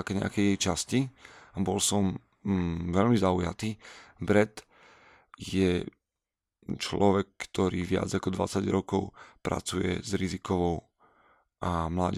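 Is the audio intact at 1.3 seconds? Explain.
Yes, at 1.3 seconds the speech plays through cleanly, with no audible dropout, click, distortion or other fault at that point.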